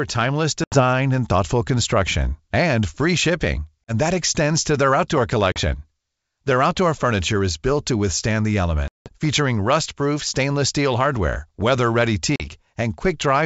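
Packet loss on an ADPCM call drops the audio to hard-edged silence at 0.64–0.82 s, 3.86–3.93 s, 5.52–5.61 s, 8.88–9.13 s (the longest, about ten packets) and 12.36–12.47 s. Each time, the decoder's predictor falls out of step, so the speech returns slightly distorted before settling.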